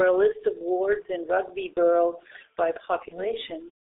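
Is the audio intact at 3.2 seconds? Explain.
No. At 3.2 seconds the speech briefly turns into a smeared, buzzy tone that fades and stays weak and distorted, from about 3.08 to 3.26 s. This is VoIP packet loss concealed by the speech codec. One 30 ms frame went missing, and the decoder filled the gap by repeating its last pitch and spectral shape at falling gain. Because each following frame builds on that guessed state, the damage lasts well past the lost 30 ms.

Underneath that, the moment carries the same muffled, hoarse, band-limited sound as the whole clip, with consonants blurred and almost nothing outside roughly 150 Hz to 3.7 kHz. That is the G.723.1 codec, and here the damage is heavy. Its long 30 ms frames and very low rate, which fits about 6.3 kbit/s, leave little detail to rebuild speech from. Its slowly updated voice model also lags behind fast changes in articulation.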